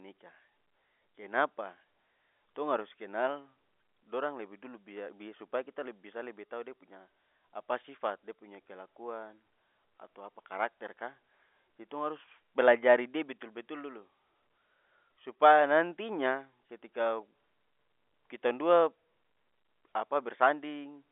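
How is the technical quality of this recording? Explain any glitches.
No glitches turn up anywhere in this speech recording; it just has the narrow sound of an ordinary phone line, with G.711 telephone coding holding things to roughly 250 Hz through 3.5 kHz and leaving nothing above about 3.8 kHz.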